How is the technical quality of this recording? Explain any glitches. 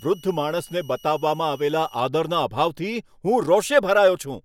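A switching supply whistle sits over the speech from 0.0 to 2.0 s: a thin high tone near 2.9 kHz, roughly 30 dB below the voice. A switching regulator is running in an audible burst mode or beating with another one. Unlike a fixed test tone, its pitch wanders slightly, between 2.90 and 2.92 kHz.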